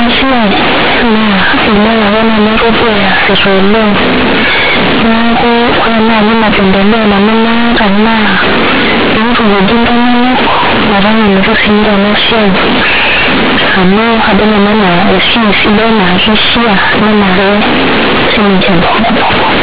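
From the first moment to the end, the speech shows companded audio read as linear: A-law G.711 bytes are being played back as plain 8-bit samples with no expansion step. Because the logarithmic code is taken at face value, every sign change throws the output across roughly half its range, so quiet passages come out as loud as peaks. The result is harsh, very loud buzzy distortion, with heavy noise filling the pauses and a 4 kHz telephone band limit beneath it.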